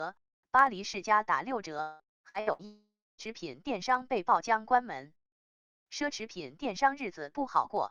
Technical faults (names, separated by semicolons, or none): repeated packet loss (robotic sound); long network dropout